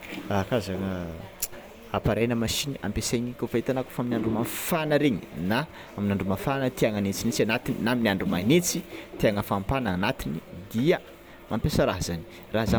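No technical faults are audible.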